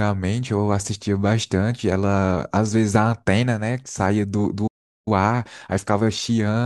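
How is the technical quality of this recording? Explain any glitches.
The speech is disrupted by two linked playback faults near the end.

From 4.67 s to 5.08 s there is a playback stall: the speech cuts off mid-flow and roughly 0.39 s of silence follows before it resumes. The likely cause is the player running out of buffered data or its output thread being blocked. On a waveform this shows as an abrupt flat line. A spectrogram shows a clean vertical gap with energy stopping sharply at all frequencies.

From 5.08 s to the end, time-compressed catch-up follows. The player works off its backlog by dropping small pieces of audio and cross-fading the joins, so the speech runs about 1.1 times faster at unchanged pitch. On a spectrogram the harmonics stay at the same heights while syllables sit closer together, and small smears or discontinuities appear at the splice points.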